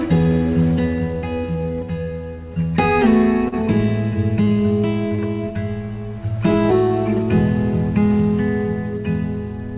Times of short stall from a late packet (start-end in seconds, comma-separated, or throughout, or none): 3.48-3.54, 4.43-4.49, 5.15-5.21